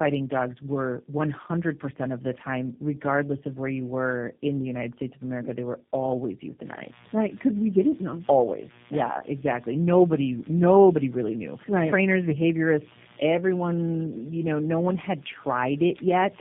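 Tandem speech coding runs throughout the clip: the speech was encoded and decoded by three low-rate speech codecs in turn, each reworking the last one's damage. It sounds rough, muffled and warbly, with nothing above 3.5 kHz, which fits a chain ending in G.729A.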